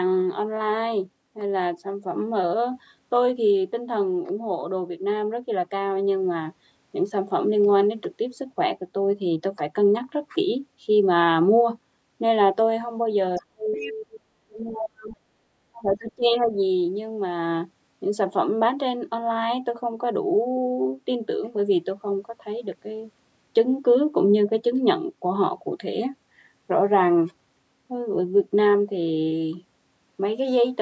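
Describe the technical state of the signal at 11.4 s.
At 11.4 s the speech is intact, with no fault present, only the ordinary call microphone processing that trims the deepest bass and leaves nothing above 8 kHz.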